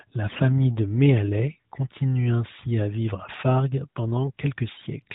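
AMR bit errors hit from 0.30 to 0.50 s, which fits eight 20 ms frames arriving with a few percent of their weaker bits flipped. The excitation pulses land in the wrong places and the fine gain and spectral values drift, so the speech keeps its pitch and level but turns hoarse, scratchy and gargly.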